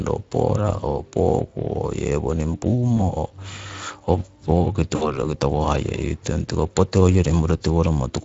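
Speex codec coloring runs through the whole recording. This CELP speech coder models each stretch of speech as a filter excited by a coded pulse signal, and the excitation here is coded coarsely enough that its errors are plainly audible as a grainy, hoarse roughness on the speech. The level of damage points to a Speex setting of around 20 kbps.

VoIP packet loss concealed by the speech codec appears from 2.97 to 3.12 s. A gap that fits a single lost 20 ms frame was filled by the decoder, which repeated its last pitch and spectral shape at falling gain, producing a brief smear. The speech stays dulled for a short while afterward because each decoded frame depends on the one before it.

The same concealment happens again from 4.95 to 5.17 s, this time over a gap that fits about 60 ms of lost audio. Here the extrapolated sound lasts long enough to be heard as a stretched, fading sound before the speech recovers.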